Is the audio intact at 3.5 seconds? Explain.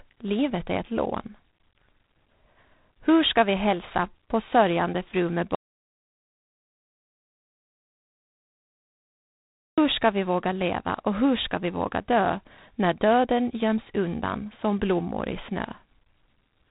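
No. G.726 ADPCM coding affects 3.5 s, as it does the whole clip: each sample is stored as a coarse difference from a prediction, leaving a harsh, rasping hiss that follows the speech level, which fits 24 kbit/s, and nothing above 3.8 kHz.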